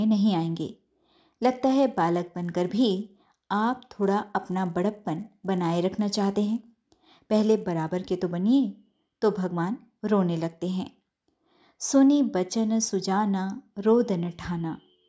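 From 0.63 to 8.22 s the speech carries a 100 Hz buzz that appears only under sound. This is a resampler restarted on every block: each 10 ms block went from 24 kHz to 16 kHz in isolation, leaving an error at every block edge.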